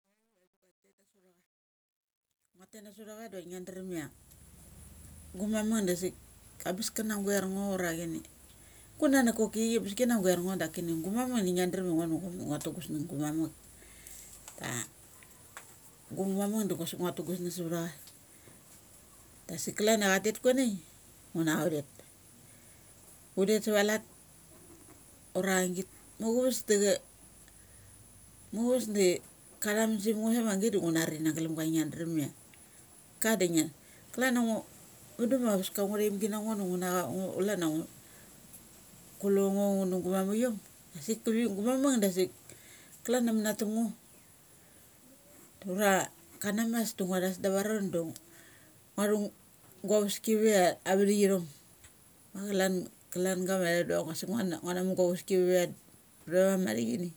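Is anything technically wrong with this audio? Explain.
Yes. The fade-in over the first 4.75 s of this speech clip has truncation distortion on a fade. The gain stage drops the low-order bits without dither, and the sound points to only about 11 bits surviving. Near the bottom of the ramp the waveform collapses into a few coarse square steps. From 0 to 2.82 s the rising level sounds gritty. The grit then eases as the fade reaches full level.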